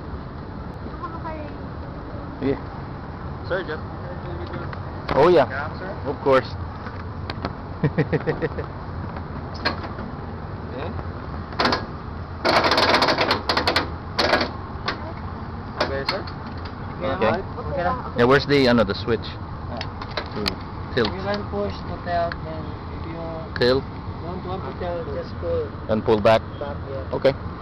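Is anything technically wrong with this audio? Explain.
No, nothing is technically wrong with this audio.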